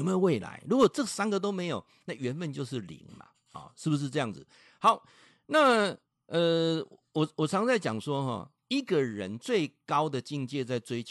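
No technical faults can be heard anywhere in this speech recording. There is nothing in the signal that needs a timestamp or an explanation.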